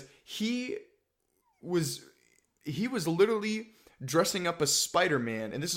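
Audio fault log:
No technical fault can be heard in the speech recording; the signal stays intact and continuous throughout.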